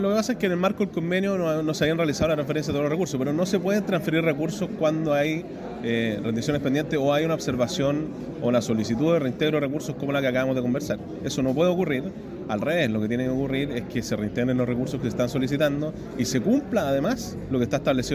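No technical faults are audible.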